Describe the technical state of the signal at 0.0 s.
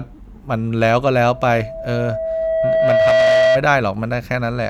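At 0.0 s the signal is intact, with no technical fault present at that moment.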